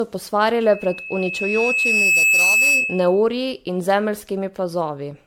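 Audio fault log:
Throughout: generation loss. The speech has a swirly, hollow, smeared character beyond what a single 96 kbit/s MP3 pass would give, and consonant attacks are blurred. This is likely the result of about ten successive MP3 encodes, each requantising on a shifted frame grid so that noise and gaps accumulate. On a spectrogram the upper bands look patchy and flickering, with holes that come and go between frames, and nothing above about 19.9 kHz.
0.62–3.24 s: loudspeaker feedback squeal. A single tone at 2.6 kHz swells over roughly a second and a half into a sustained squeal that sits about 5 dB above the speech before it stops. A microphone was hearing its own loudspeaker, and at that frequency the loop gain passed one, so the tone fed itself. On a spectrogram it is a bright horizontal line at 2.6 kHz that grows steadily stronger. In the waveform the envelope rises over the same span.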